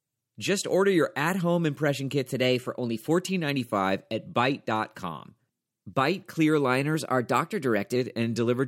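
From 2.34 to 3.08 s, and again from 6.95 to 7.96 s, the speech abruptly runs about 6.4% fast and rises in pitch by 107 cents, a little over a semitone, then snaps back to normal. Speed and pitch move together, so the voice sounds briefly hurried and sharpened. This is likely a drift correction step, where clock-matching software changed the playback rate in a single jump to rebalance its buffer.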